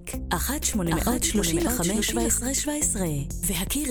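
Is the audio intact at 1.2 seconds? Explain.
No. A doubled audio track runs from 0.6 to 2.38 s, so 1.2 s falls inside it. A second full-band copy of the sound trails the original by roughly 0.7 s, around 5 dB quieter, most likely because the signal was captured again through a slower path. The copy carries no decay or room colouring, so it sounds like a flat, out-of-step repeat layered over the audio, and it cuts in and out abruptly at both ends.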